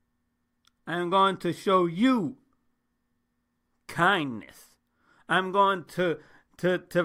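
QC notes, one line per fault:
No faults detected.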